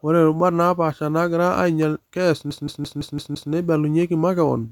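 From 2.50 to 3.52 s the speech gets a CD stuck on one turn: a 169 ms slice repeats six times with tiny mutes, that quick even stutter, before "neibalunyeki makeon".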